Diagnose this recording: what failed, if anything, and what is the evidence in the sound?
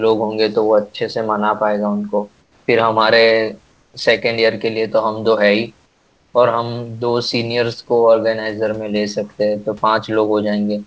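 Comfort noise in place of the background appears in three pauses in the speech: 2.42–2.68 s, 3.72–3.94 s and 5.86–6.34 s. In each gap the room noise, about 40 dB below the speech, gives way to a flat, featureless hiss that is about 5 dB, 2 dB and 4 dB quieter. This is likely the call processing's discontinuous transmission: the sender went silent when no speech was detected, and the receiver synthesised shaped noise until speech resumed.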